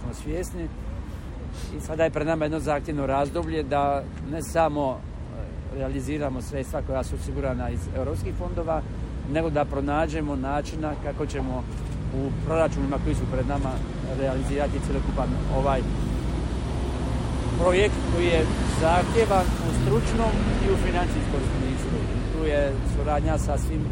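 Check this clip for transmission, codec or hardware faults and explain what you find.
MP3 compression runs through the whole clip, plainly audible, and the coding damage likely comes from a low bitrate, around 64 kbps. Short of bits, the encoder cuts the treble and drops weak frequency lines frame by frame. The sound turns watery and swirly, with metallic chirps and smeared attacks. A spectrogram shows a flat ceiling and flickering holes in the upper bands.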